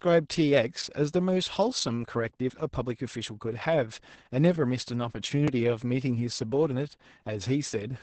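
From the start, the speech carries heavy Opus voice compression. It sounds muffled, hoarse and slightly robotic, which points to the SILK coder at a rate around 10 kbps. On a spectrogram the energy stops flat at about 8.6 kHz, and the harmonics above the lower bands look smeared and grainy.

At 5.48 s a short piece of audio, about 20 ms, drops out and the two sides are butted together with no silence, heard as a quick skip. This is likely audio missing between chunks. The waveform shows an abrupt discontinuity there instead of a gap.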